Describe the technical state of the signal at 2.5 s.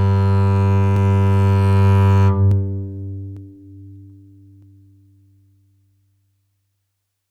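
A single sharp click sounds in the music at 2.51 s, likely dropped samples: under a millisecond of the waveform is missing, so it jumps abruptly to a later value.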